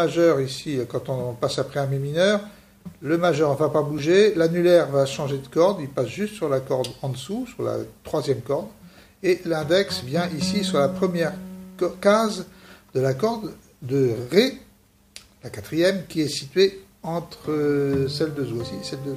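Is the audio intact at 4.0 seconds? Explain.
No, not quite. Right around 3.98 s there's a repeated buffer: fresh audio didn't reach the output in time, so the device played its last tiny chunk of about 1.45 ms twice more, which fits a 64-sample buffer. With pieces that short, you don't hear a stutter. It comes across as a quick click or brief buzz from the hard joins. Essentially no audio goes missing; the sound is just briefly held.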